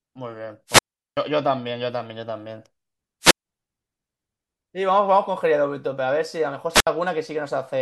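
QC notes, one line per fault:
0.67–1.17 s, 3.22–3.46 s, 6.72–6.87 s: wireless microphone squelch dropout. The radio link fades, so the receiver's squelch mutes output for 386, 149 and 67 ms.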